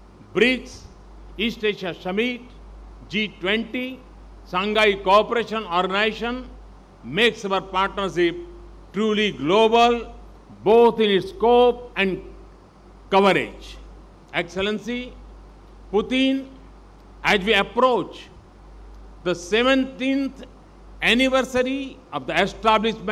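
From 4.15 s to 19.13 s, a regular click recurs every 5 s, about four in all. These are likely clock drift buffer slips: two clocks about 40 ppm apart let the buffer drift until a few samples are dropped or repeated.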